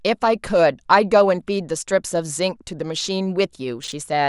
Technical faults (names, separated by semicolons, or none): chunks out of order